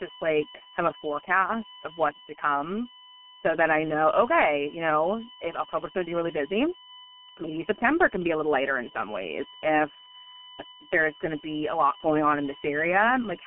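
Speech, with a steady USB whine running the whole way: a fixed-pitch tone built on 1 kHz harmonics, loudest up at 14 kHz and only roughly 15 dB under the talker. It's also been through the G.723.1 codec, heavily mangled. The band sits around 200 Hz to 3.6 kHz with nothing above 3.8 kHz, and it's muffled and hoarse with smeared consonants, which fits the low 6.3 kbit/s mode.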